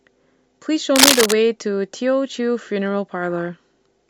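From 0.96 to 1.33 s, cable scratch noise rides over the speech: a dense, uneven burst of scratching and rustling, slightly louder than the speech itself. The likely cause is a worn cable or connector being moved, its contact resistance fluctuating rapidly.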